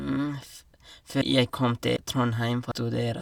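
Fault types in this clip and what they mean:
Audio missing between chunks: the speech skips at 0.47, 1.22, 1.97 and 2.72 s, each losing about a third of a second, likely at one-second block boundaries. The waveform shows seamless splices with no silent gap, and the spectrogram shows vertical breaks in the formant tracks.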